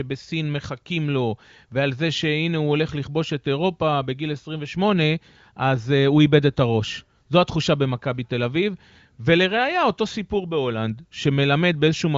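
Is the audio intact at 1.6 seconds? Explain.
Yes, the speech at 1.6 s is intact, with no fault at that moment.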